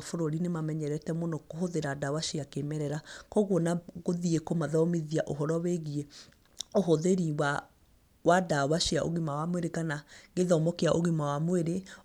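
No technical faults are audible.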